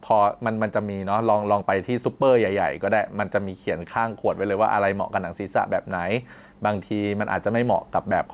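Speech heard through a narrowband call path, with nothing above 4 kHz, shows gain pumping throughout, a swing of around 5 dB. The likely cause is microphone gain set far too high, with a fast limiter or compressor clamping it on each peak. On a waveform the envelope looks flattened, loud and soft passages closer in height.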